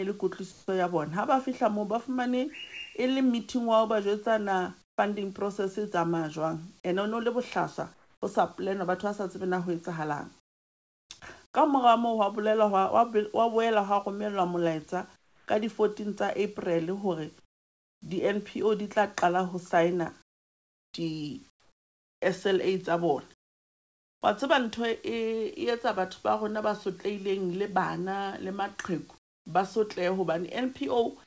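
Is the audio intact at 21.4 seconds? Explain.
No. From about 20.22 to 24.22 s the real background gives way to a flat, featureless hiss for roughly 2.3 s. That's comfort noise in place of the background, likely because the sender stopped transmitting during the pause and the receiver filled the gap with synthetic noise.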